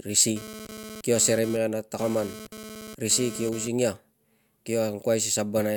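From 0.36 s to 3.68 s the speech carries GSM phone buzz, a hard, raspy tone at 216.7 Hz with a dense stack of harmonics, sitting about 14 dB below the signal. A nearby 2G handset was transmitting in timed bursts, and the audio circuitry rectified those radio pulses into the audible band. Because the phone was moving data rather than holding a call, the buzz comes and goes instead of holding steady.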